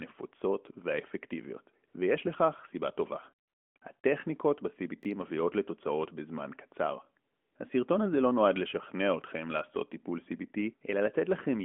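AMR comfort noise first appears from 1.88 to 1.94 s, for 60 ms. The phone judged the speech to have paused and stopped sending speech frames. The receiver filled the gap with synthetic noise built from a rough level and spectrum. The real background gives way to a smooth, steady hiss that switches in and out. It returns from 3.48 to 3.76 s (280 ms), 3.78 to 3.82 s (40 ms) and 4.00 to 4.04 s (40 ms). This cluster makes the background flicker.

From 5.03 to 5.05 s, chunks out of order cause a brief jumbled moment. A 10 ms piece of audio plays one chunk late, after the chunk that should follow it. No audio is missing, but the hard joins at the swapped edges give a short garble.

AMR comfort noise comes back from 7.32 to 7.56 s, for 240 ms. This is another stretch of steady synthetic hiss in place of the true background. All of this passes through the narrowband mobile codec. Its 3.4 kHz top edge and mild colouring point to AMR-NB at about its 12.2 kbps mode.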